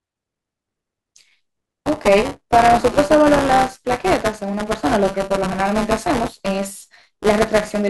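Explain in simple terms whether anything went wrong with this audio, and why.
Buffer tearing runs through the whole speech clip, heard as a robotic 200 Hz buzz whenever someone is talking. The playback software and the sound hardware fell out of step, so each short chunk of audio includes a small slice replayed from about a hundredth of a second earlier, joined by abrupt cuts.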